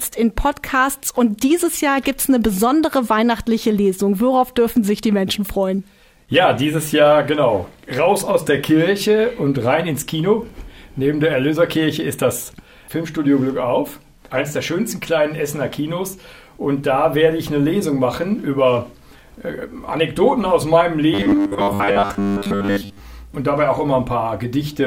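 Robotic sound from repeated short buffers runs from 21.14 to 23.0 s, where the audio collapses into a rigid, metallic buzz fixed at 100 Hz that only loosely tracks what came before. The likely cause is new audio arriving too seldom, so playback keeps looping the most recent fragment, one matching a 10 ms buffer, to fill the gap. Most of the sound in that stretch is these repeats rather than fresh material, and the real audio in between is skipped.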